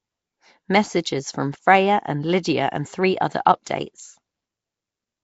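Nellymoser compression runs through the whole recording, heard as a rough, hissy halo around the speech and a smeared, underwater quality that is plainly audible from start to finish. The likely cause is Flash's old microphone codec, which codes short blocks at a fixed two bits per sample and gives weak bands no bits, refilling them with noise. The damage level fits a rate of around 32 kbps, and nothing is present above 7.7 kHz.

Pre-echo appears at 3.45 s, where a brief hiss of about 10 ms arrives just ahead of a sharp attack, leaving the onset soft and blurred. The attack fell late in a transform block, so the quantisation noise sized for the loud part of that block also spread across the quiet instant before it, where nothing masks it.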